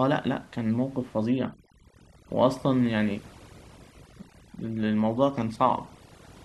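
From about 1.29 s to the end, the background drops and breaks up into twinkling, warbling specks. That is overdone noise removal: a noise reducer set too hard pulls individual frequency bands down whenever they sit near its noise estimate, taking quiet speech detail with them. The room noise before that sits about 25 dB below the speech.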